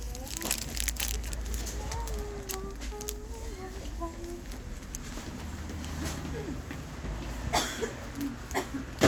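A recording of everyday sounds, with no technical fault audible anywhere in it. Nothing in the signal calls for a time, a value or a cause to be pointed out.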